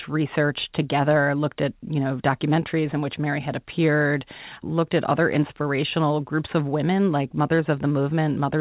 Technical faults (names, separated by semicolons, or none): none